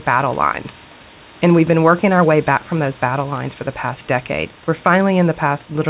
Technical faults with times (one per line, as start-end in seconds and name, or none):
none